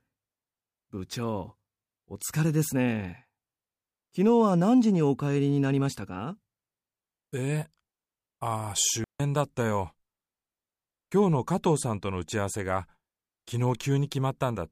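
A digital wireless dropout at 9.04 s: the receiver lost too much data and muted for about 160 ms, leaving a clean hole in the speech without noise bursts.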